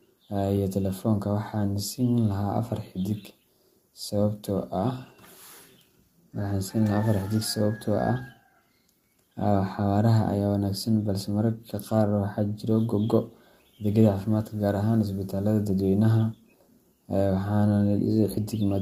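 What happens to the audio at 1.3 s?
Nothing goes wrong at 1.3 s: the speech there plays through intact, with no dropout, click, or distortion.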